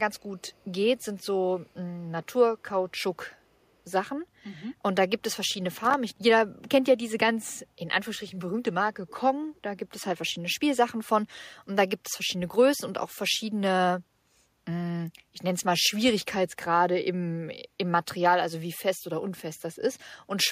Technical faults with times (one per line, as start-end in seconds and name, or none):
0.39-0.64 echo leak
5.84-5.94 loose connector crackle
9.07-9.16 echo leak